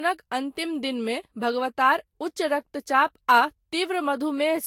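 Speech with generation loss across the whole recording: a swirly, smeared, hollow quality, blurred consonant attacks, and nothing above 16.6 kHz. It sounds like the audio was likely re-encoded around four times through a lossy codec near 60 kbit/s, each pass adding fresh quantisation noise and spectral holes.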